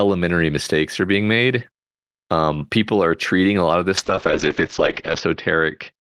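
From 3.98 s, after "a lot of this", a call bitrate drop runs to the end. Bandwidth narrows from 20 kHz to 8 kHz and the sound turns watery, fitting a fall from about 32 to 10 kbps. Unlike a plain low-pass filter, the coding grows coarse, not just duller.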